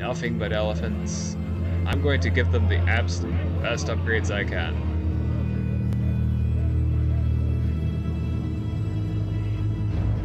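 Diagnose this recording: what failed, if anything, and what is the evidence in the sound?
Network streaming stage: an overlap between stream segments. Adjacent 2-second segments carry overlapping time stamps, so the player discards audio that was never actually duplicated. About 6 ms and 16 ms disappear and the waveform jumps, giving brief clicks or skips at 1.93 s and 5.93 s.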